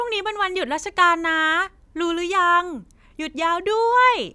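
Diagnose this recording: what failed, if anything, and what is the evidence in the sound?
Listening to the speech closely, nothing stood out at any stage of the signal chain.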